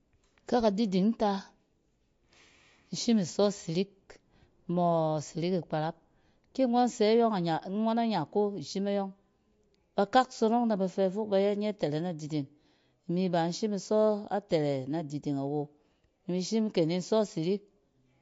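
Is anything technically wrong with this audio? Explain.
Yes. Throughout the speech there is plainly audible damage, likely from MP3 compression. Nothing is present above 7.6 kHz, and weak spectral detail flickers between frames, giving a watery, swirly texture with smeared attacks, which fits a low bitrate around 48 kbps.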